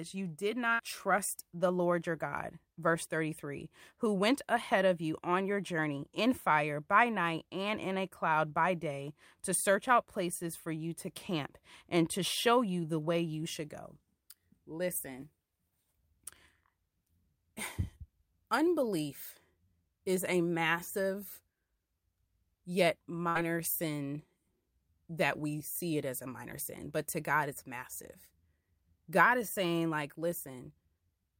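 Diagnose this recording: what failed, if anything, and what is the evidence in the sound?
Network stage: a burst of packet loss at 0.73 to 0.82 s, between "you did" and "trust the", and again at 23.29 to 23.38 s. Each time about 60 ms is missing, and the receiver filled the gap by stretching and fading the preceding sound rather than leaving the silence or hard click of a buffer underrun.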